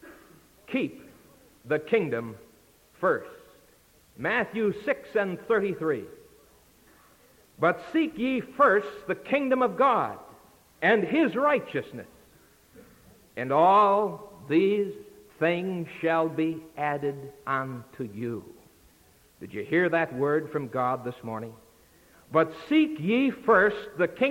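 Nothing stood out as a technical problem on listening.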